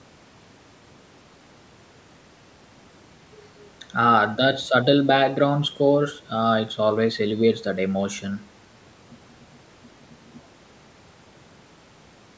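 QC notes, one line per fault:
No faults found.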